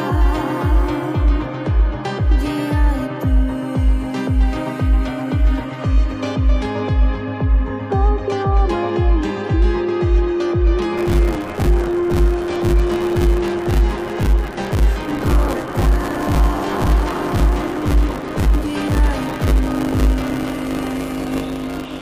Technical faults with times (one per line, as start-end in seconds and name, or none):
10.97-22.01 buffer tearing